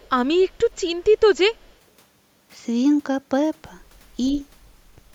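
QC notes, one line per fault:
0.0 to 0.09 s, echo leak: there's a very faint delayed copy of the speech trailing it by 122 ms, way down under the main signal. Most likely the far end is on a loudspeaker and its echo canceller let a scrap of its mic pickup back through.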